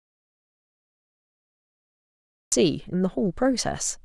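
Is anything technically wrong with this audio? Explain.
Yes. There is an audio dropout to silence from the very start to 2.52 s: the input was likely lost, so the recording carried on writing silence. The clip opens in total silence with no room tone, and the speech cuts in abruptly at 2.52 s.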